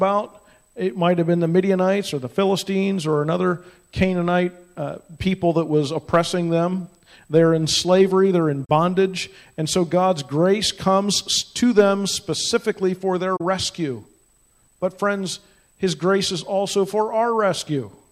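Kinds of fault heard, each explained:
AAC frame loss with muting: the decoder received nothing for a stretch of the coded stream and filled the gap with a zeroed spectrum, so the sound drops out at 8.65 s and again at 13.36 s, each time for about 43 ms, which fits two lost frames. Because the overlapping transform windows fade out and back in, a spectrogram shows a narrow vertical gap with tapered edges, and the waveform shows a short soft-shouldered hole.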